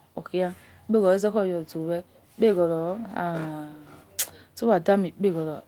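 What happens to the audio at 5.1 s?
Nothing goes wrong at 5.1 s: the speech there is intact, carried through the Opus voice compression at 24 kbps in its hybrid fullband mode with only light coding damage.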